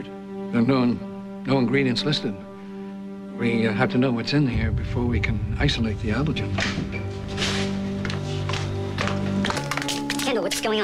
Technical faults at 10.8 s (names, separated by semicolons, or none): section at the wrong speed